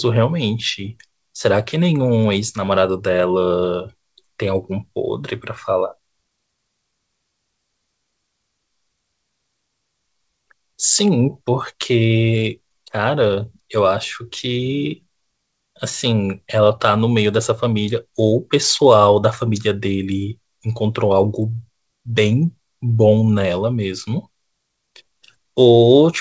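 No technical faults can be heard in this recording.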